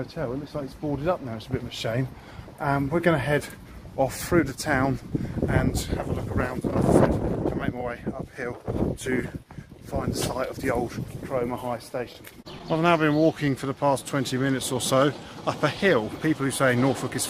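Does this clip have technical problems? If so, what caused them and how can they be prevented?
Yes. Between 12.52 and 13.00 s there are scattered short gaps: about four lost or late packets, none longer than about 10 ms, each patched by extending the preceding sound. Unlike one long dropout, these are brief ticks and smears spread across half a second, never a clear silence. A steadier network path or forward error correction would prevent these small losses.

From 13.20 to 14.96 s comes a jitter buffer slow-down. The receiver stretched the audio by repeating short stretches of waveform to rebuild its reserve, adding 95 ms and running at 95% speed. Unlike a resampling or clock error, the pitch stays where it was while the sound draws out. Reducing network jitter, or letting the buffer adapt more gradually, would prevent this stretching.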